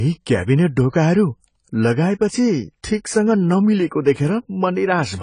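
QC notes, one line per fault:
Throughout: AAC compression, likely AAC-LC at a low bitrate, something around 24 kbps. Nothing gets through above 10 kHz, so the speech sounds dull, and the encoder starving the upper bands leaves a plainly audible smeared, warbly fizz on sibilants.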